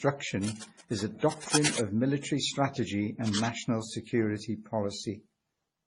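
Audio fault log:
Throughout: transcoding between lossy codecs. The speech has no content above 11 kHz, and two different kinds of coding damage are heard at once. There is the smeared, swirly high end of a low-rate MP3, and over it the slightly metallic, synthetic top that HE-AAC's band replication adds. This most likely comes from an MP3 re-encoded to HE-AAC. A single codec would leave only one kind of damage, but here the second codec has preserved and re-coded the first codec's errors.
0.44–1.79 s and 3.25–3.48 s: cable scratch noise. There are dense, irregular bursts of rustling and scratching, only a few decibels below the speech. The first burst ends just before "of military strategy", and the second starts just after it. This is likely a worn cable or connector whose contact resistance changed quickly as it moved. The noise is a continuous, uneven scrape rather than separate clicks or a steady hiss, so it is unlike crackle or background noise.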